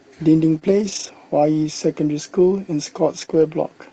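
From 0.43 to 0.57 s, and again from 0.63 to 1.09 s, you're hearing lost packets rebuilt from error correction. Opus carried a low-bitrate backup copy in the following packets, so there's no gap, just rougher, noisier speech that stays within the call's 8 kHz bandwidth. The same thing happens at 3.17 to 3.23 s and 3.29 to 3.43 s. Between those stretches, around 0.59 to 0.63 s and 3.25 to 3.29 s, there's short concealed packet loss. About 20 ms never arrived, and the decoder extended the preceding sound to cover it, leaving a brief smear or wobble.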